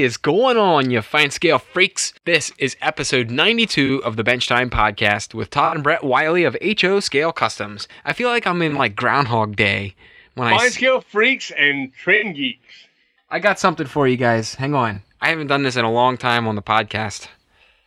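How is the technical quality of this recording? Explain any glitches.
The recording has five short glitches: 3.86–3.90 s, 5.65–5.76 s, 8.69–8.80 s just after "I feel like I'm", 12.15–12.26 s after "scale freaks and", and 14.94–14.98 s just before "I haven't done this". These are corrupt frames concealed. Damaged AAC frames were caught by the decoder and replaced with silence or a scrambled copy of the last good spectrum, and each event hit between one and four frames.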